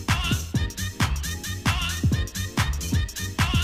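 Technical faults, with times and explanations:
throughout mains buzz: a raspy 60 Hz buzz roughly 30 dB below the signal, rich in harmonics up to several kHz from switching spikes, unlike a smooth low hum.
1.43 s, 2.91 s compressed frames skipped: the audio jumps ahead about 300 ms, then about 100 ms, with smeared blips, not clicks or silent gaps, fitting lost frames of about 26 ms each.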